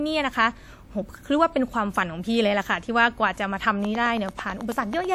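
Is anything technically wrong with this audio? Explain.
Yes. From 3.85 s to 5.05 s there is a train of clicks: a steady ticking of about ten similar pops, evenly spaced at 9.2 per second, laid over the speech and standing out at around 5 dB above it. The regular pace and similar shape point to something outside the speech injecting a repeating pulse, likely electrical interference from nearby equipment or a faulty connection or power supply.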